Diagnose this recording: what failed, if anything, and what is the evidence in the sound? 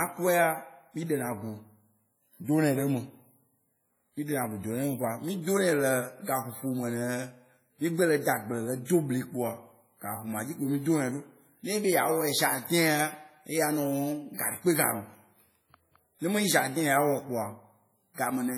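WMA compression, throughout the speech: the sound is ringing and washy, with a hiss that swells and recedes with the signal and weak detail dropped out. The likely cause is a codec stage, a low-bitrate transform encoder, heavily damaged, which fits a rate around 32 kbps.

Pre-echo, at 14.33 to 14.39 s and 18.14 to 18.18 s: a short hiss of about 57 ms and then 40 ms runs ahead of sharp onsets, softening them. The codec spread quantisation noise across each block, so it filled the quiet before the attack.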